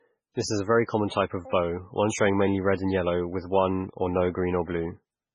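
Speech runs for the whole clip with heavy damage of the kind MP3 compression leaves, likely from encoding at a very low bitrate, which fits something around 16 kbps. Nothing remains above 10.1 kHz, where the encoder has cut the treble. Weak frequency lines drop in and out between frames, giving a watery, swirling texture, with metallic chirps on s sounds and smeared consonant attacks.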